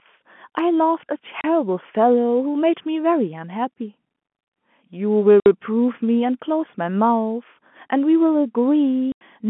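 Packet loss filled with silence cuts the speech three times: 1.41 to 1.44 s, 5.40 to 5.46 s, and 9.12 to 9.21 s. The holes last 30, 60 and 90 ms, multiples of 30 ms, which points to one, two and then three consecutive 30 ms packets going missing. The receiver played dead silence in their place, so each gap drops abruptly to nothing with hard edges against the narrowband telephone-line sound.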